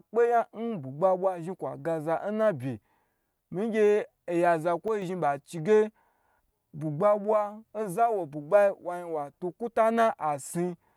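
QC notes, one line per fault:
4.88–5.02 s, sudden gain jump: the speech and its background noise fall together by about 6 dB in one step, with no fade in or out of the quieter stretch. The likely cause is a gain change or bit shift applied instantly instead of ramped.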